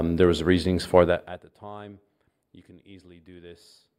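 Nothing stood out on listening to this speech recording.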